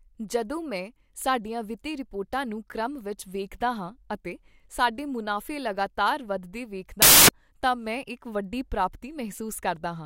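A speech clip in which, from 7.02 to 7.29 s, just after "ਸਾਡੇ ਮੁਨਾਫ਼ੇ ਲਗਾਤਾਰ ਵੱਧਦੇ" and before "ਤਾਂ ਮੈਂ", samples built from the wrong bytes turn the audio into loud, harsh broadband noise. The misordered low bytes dominate each value, unlike an added noise burst.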